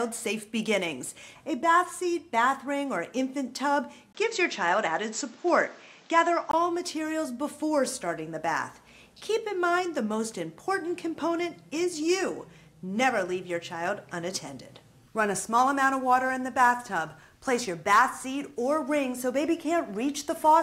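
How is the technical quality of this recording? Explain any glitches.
The recording has one fault. From 4.13 s to 6.53 s the input appears switched to a poorer device, likely another microphone or a headset call profile. After a 20 ms dropout, nothing above 8 kHz remains, so the sound turns dull and boxy. A different background noise appears, roughly 30 dB below the signal, while the overall level stays about the same.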